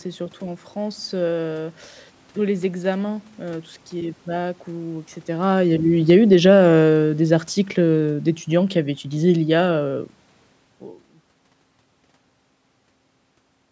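From 5.32 s to 9.95 s the speech sinks steadily as the automatic gain falls. The automatic gain control judged the input too loud, or its background noise too strong. It then lowered its gain gradually, by about 9 dB in total. The drop is smooth, not sudden. The room noise sinks along with the voice, which marks this as gain, not distance. The talker's own level shifts, near 5 s and again around 10.5 s, sound different. There the background stays put.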